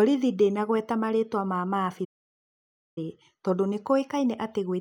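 At 2.04 s the player most likely ran short of buffered data, or its output thread was held up, producing a playback stall that lasts until 2.98 s. For about 0.92 s nothing reaches the output, so the speech cuts off abruptly mid-flow and the clip falls into dead silence, a noticeable gap, before the sound picks up again once playback recovers.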